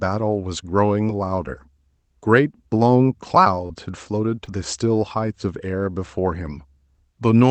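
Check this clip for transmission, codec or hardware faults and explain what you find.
Three brief glitches point to short concealed packet loss, at 1.07–1.09 s, 3.66–3.70 s and 4.45–4.48 s. Each is a quick smear or wobble in the speech. Gaps of about 10, 30 and 20 ms arrived too late to decode, so the receiver extended the preceding sound to cover them before blending back.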